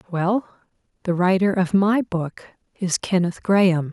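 Speech recording, and nothing is technically wrong with it.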